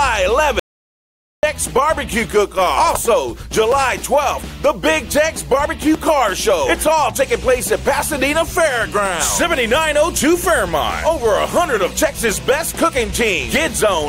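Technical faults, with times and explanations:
0.60 to 1.43 s, audio dropout to silence: the sound cuts off abruptly and returns just as suddenly about 0.84 s later, with dead silence between and no room tone or noise floor in the gap, so whatever was playing then is lost. That empty gap sets it apart from a noise gate or a brief level dip. The likely cause is input lost to a disconnected device, a failed link or a stray mute while recording carried on.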